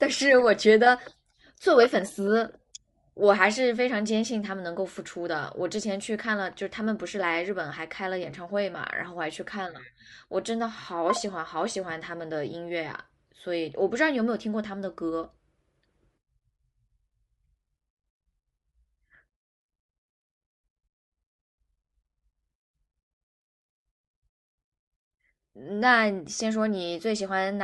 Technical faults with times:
0.00-27.63 Bluetooth LC3 compression

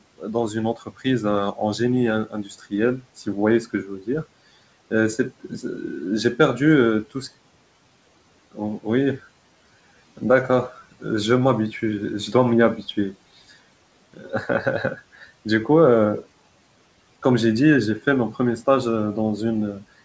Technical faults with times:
0.17-4.09 speech cut by the noise suppressor
8.52-9.19 speech cut by the noise suppressor
14.14-15.46 speech cut by the noise suppressor

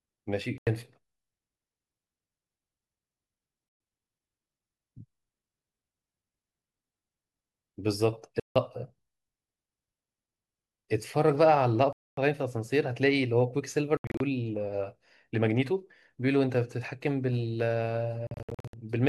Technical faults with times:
0.58-0.67 Bluetooth dropout
3.69-3.80 Bluetooth dropout
8.40-8.56 Bluetooth dropout
11.93-12.18 Bluetooth dropout
13.97-14.20 Bluetooth dropout
18.27-18.74 Bluetooth dropout

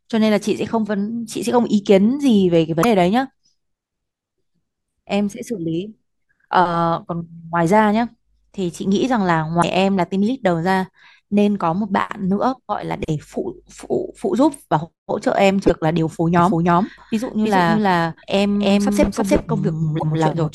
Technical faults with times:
2.80-2.85 damaged data in a compressed stream
9.59-9.64 damaged data in a compressed stream
15.64-15.70 damaged data in a compressed stream
16.39-20.54 doubled audio track
19.96-20.03 damaged data in a compressed stream

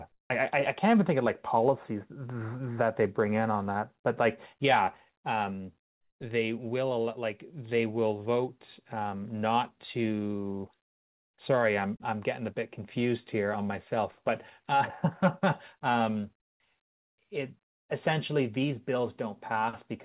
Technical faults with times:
0.12-0.30 comfort noise in place of the background

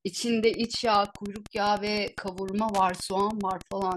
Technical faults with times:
0.35-3.97 Wi-Fi interference

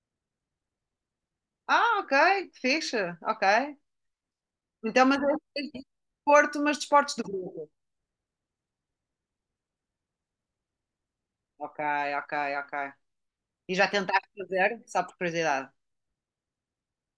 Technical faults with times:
none

